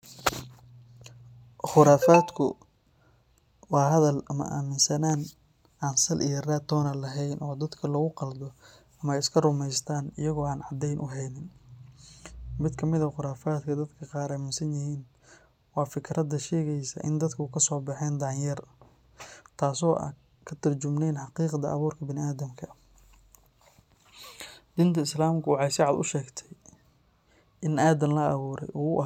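No technical faults can be heard anywhere in the speech recording; the signal holds steady throughout.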